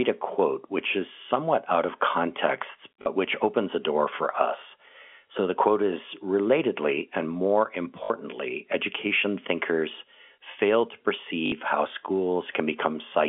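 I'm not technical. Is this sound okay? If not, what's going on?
No. There is packet loss with last packet repeated at 3.02, 8.04 and 11.46 seconds. Bits of speech went missing, so a tiny chunk replayed, causing brief robotic stutters lasting 40 to 60 milliseconds.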